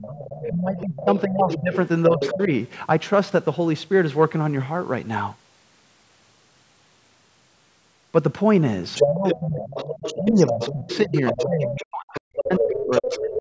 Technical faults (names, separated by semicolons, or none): other side's voice leaking through; speech suppressed in double talk